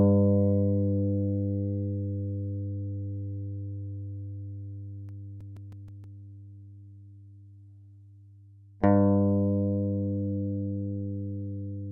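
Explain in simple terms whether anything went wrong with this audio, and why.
Between 5.09 and 6.20 s there are eight quick ticks, each lasting only a few milliseconds. These are CD scratch ticks. A scratch spoiled more data than the disc's error correction could repair, once per turn. The player then patched or silenced those tiny gaps.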